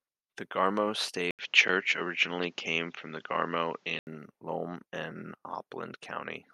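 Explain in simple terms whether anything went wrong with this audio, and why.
Yes, something does go wrong here. At about 1.31 s the speech suddenly turns duller and boxier, with a brief 80 ms gap right at the change, and it stays that way until about 4.07 s. Nothing above 7.6 kHz gets through in that stretch, the loudness shifts a little, and a faint new background noise appears. That pattern points to the likely cause: the input switched to a poorer device partway through, then switched back.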